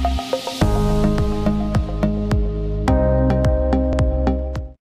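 From 3.62 s to the end, the treble suddenly dulls and a gritty, grainy noise rises under the sound, with no recovery before the clip stops. This is a Bluetooth SBC bit pool drop. When the wireless link gets congested, the sender cuts the bits spent on each frame. The highest sub-bands are then starved or dropped, and the rest are coarsely quantised. The drop in quality points to a bit pool falling from about 31 to 12, close to 88 kbps.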